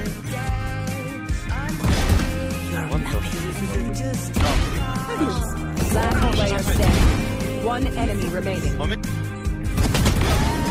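At 4.42 s the sound abruptly degrades and turns smeared, with swirly codec artefacts that persist to the end of the clip, and there is no gap or dropout at the switch. This is an adaptive stream at a lower bitrate: the player dropped to a leaner encoding mid-play, and the rise in artefacts fits a step from around 64 kbit/s Opus down to roughly 16 kbit/s.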